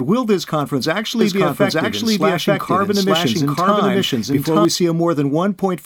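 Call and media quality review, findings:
Doubled audio track, 1.21 s to 4.65 s. Second full-band copy of the speech trails about one second behind at roughly equal level, starting and stopping abruptly. Likely a duplicate capture path or misaligned edit. Unlike echo: no decay, no room colour, no repeats.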